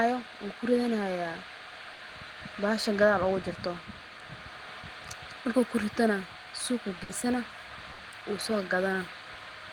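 Short runs of packets arrived too late or not at all, a burst of packet loss at 1.93 s before "bahasha gadhaal ugajirto", then at 7.03 and 7.93 s. Each time about 60 ms is bridged with a fading continuation of the last sound, and about 60 ms of speech is skipped.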